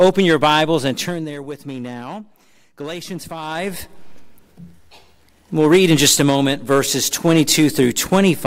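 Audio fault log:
0.77–1.37 s, zipper noise: a gain drop of about 15 dB was applied in unsmoothed 2 dB jumps, around twenty a second. Each jump puts a small discontinuity in the waveform, so a fast ticking rides on the sound as it fades.
3.41–3.84 s, zipper noise: the level was brought back up by about 15 dB in the same 2 dB steps, now around thirty a second. The steps come closer together, so the ticking becomes a quicker buzz-like zip during the rise.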